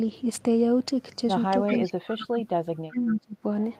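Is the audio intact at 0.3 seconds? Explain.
Yes, the speech at 0.3 seconds plays through cleanly, with no dropout, click, distortion or other fault at that moment.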